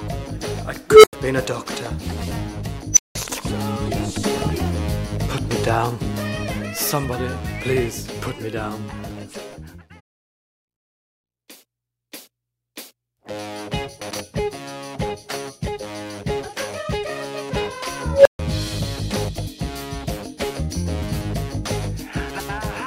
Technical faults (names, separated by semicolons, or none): unstable filter; frames out of order